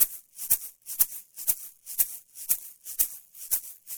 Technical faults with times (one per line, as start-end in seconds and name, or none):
0.00-3.98 sample clock jitter